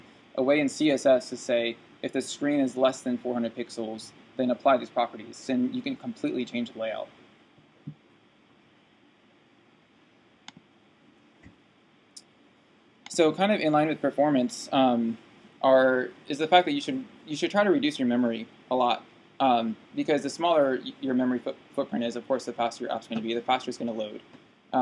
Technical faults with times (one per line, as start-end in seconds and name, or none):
none